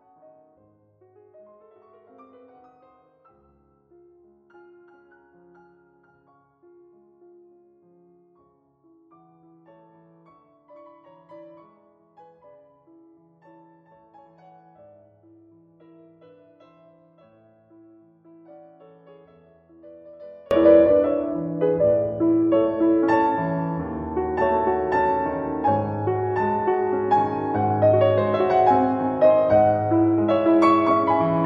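From the start to 20.51 s, the mono sum drops by about 31 dB, leaving a faint residue where the centred content and low end should be. The likely cause is one channel inverted: with one stereo channel's polarity reversed, everything shared by left and right cancels when the two are added, so only the small difference between them survives. At 20.51 s the full level returns.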